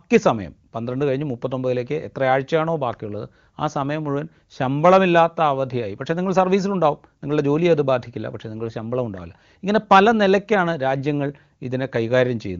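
No faults found in this speech; the wideband sound fits the AMR wideband (HD Voice) codec at its highest rate, 23.85 kbit/s, where any coding damage is faint at most.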